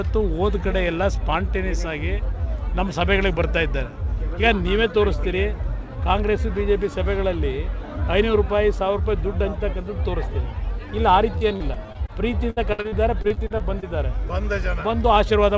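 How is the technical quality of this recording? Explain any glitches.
The recording has two bursts of repeated packet loss near the end, heard through a call path whose audio stops at 8 kHz, which fits a wideband codec such as G.722.

From 11.38 to 12.10 s and again from 12.50 to 13.84 s, repeated packet loss (robotic sound) makes the audio choppy. Short holes, up to 37 ms and 64 ms long respectively, are patched by extending the preceding sound, so fragments drop out.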